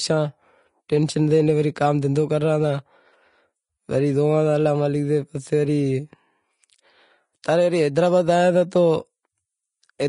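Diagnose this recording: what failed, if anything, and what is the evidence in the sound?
Vorbis compression runs throughout the speech, at the codec stage. Nothing sounds above 10.6 kHz, and the treble is hissy and grainy. The encoder has quantised fine high-frequency detail into noise of similar energy. This fits a bitrate near 32 kbps, likely a low-quality Vorbis encode.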